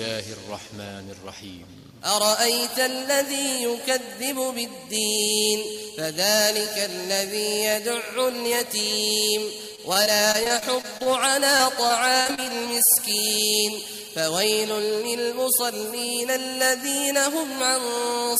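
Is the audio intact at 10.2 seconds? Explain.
No. At 10.2 seconds the audio sits inside a stretch of repeated packet loss (robotic sound), running from 9.75 to 11.07 s. About ten short holes open up in that span, the longest around 24 ms. Each hole is filled by stretching the sound just before it, so roughly 15 percent of the stretch is patched rather than real. The result is choppy, with small pieces of the sound missing.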